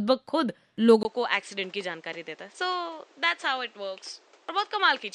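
At 1.03 s the input has likely switched to a poorer device: after a gap of about 20 ms, the sound to the end comes back narrower, with nothing above 8.8 kHz, roughly 5 dB quieter, and carrying a new noise floor around 30 dB below the signal.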